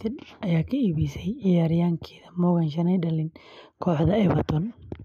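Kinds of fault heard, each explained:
Nothing in this one stands out as a fault; it's just a bit of speech that comes through without any trouble worth naming.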